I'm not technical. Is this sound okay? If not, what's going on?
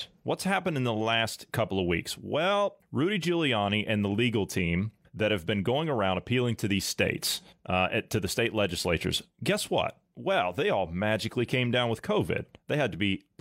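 Yes, the recording is fine, with no technical faults anywhere in it.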